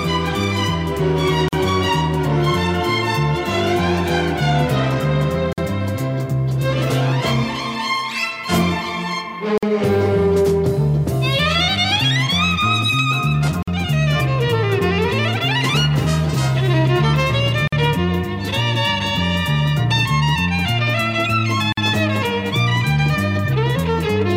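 At 1.48, 5.53, 9.58, 13.63, 17.68 and 21.72 s the sound stops for about 45 to 49 ms and then carries on exactly where it left off. This is a gap at a join of encoded pieces. Each separately encoded segment kept its encoder's leading delay and end-of-frame padding, leaving silence at every 4 s seam. Unlike a dropout, nothing is lost, the gaps fall on a strict 4 s grid, and their edges are smeared rather than hard clicks.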